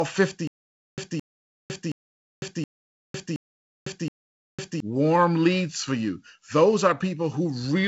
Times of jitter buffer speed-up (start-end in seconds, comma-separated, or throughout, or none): none